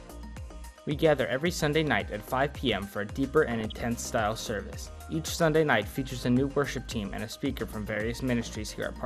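Throughout, the sound is dull and granular with a gurgling edge, most likely MP2 compression at around 80 kbps, where starved sub-bands drop out or are coarsely quantised. From 3.52 to 3.80 s, DAB burbling: bit errors of roughly half a percent corrupt 13 frames, putting short blips of noise into single sub-bands.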